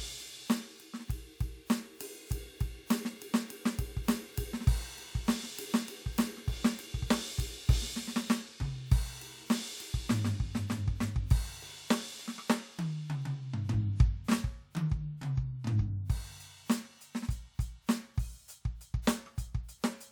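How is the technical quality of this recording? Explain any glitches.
Nothing in this music recording trips me up technically; I don't hear any glitches anywhere in it.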